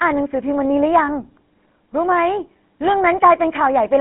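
Speech heard through the GSM full-rate codec across the whole clip, with plainly audible codec damage: a buzzy, gravelly roughness sits on the speech throughout. The sound fits the 13 kbps full-rate GSM scheme, which models the vocal tract and excites it with a sparse, regularly spaced pulse train, so fine excitation detail is lost and the harmonics turn coarse. The band is telephone-narrow, roughly 200 Hz to 3.4 kHz, with nothing above 3.9 kHz.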